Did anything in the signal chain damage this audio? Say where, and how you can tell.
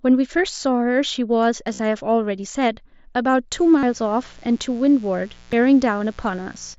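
Yes. At 1.73 to 1.79 s and again at 3.78 to 3.83 s there is a buzzy, steady tone at full level, then a slight warble as the speech resumes. This is concealed Bluetooth headset packet loss on the wireless link. The receiver filled about 52 ms and then 45 ms of lost audio by repeating recent waveform.

At 2.55 s and 5.53 s the audio skips. About 30 ms is missing and the two sides are joined with no silence. The gaps are about 3 s apart, which points to audio missing between chunks, likely at the driver or buffer stage each time one 3-second block closes and the next opens.

From 3.53 s to 6.74 s a steady, raspy buzz sits around 30 dB below the speech. This is mains buzz at 60 Hz, and its harmonics reach well up the spectrum. It comes from the analogue wiring, where sharp switching spikes from a dimmer, rectifier or poor shielding leak in twice per cycle.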